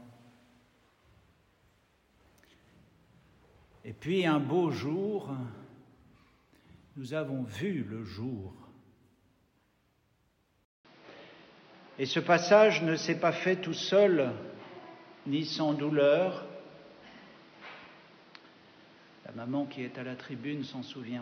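At 10.65 s a 200 ms gap opens, then the sound turns duller, with nothing above 6.1 kHz and new noise about 30 dB down. That gap and fresh noise floor mark an input likely switched to a poorer device, not plain filtering.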